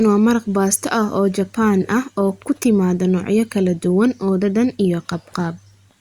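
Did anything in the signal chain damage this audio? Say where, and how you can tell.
No, nothing here was damaged.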